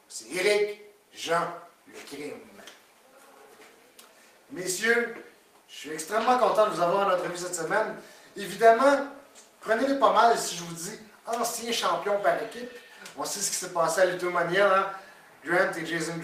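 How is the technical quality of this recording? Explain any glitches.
No glitches or technical faults can be heard here.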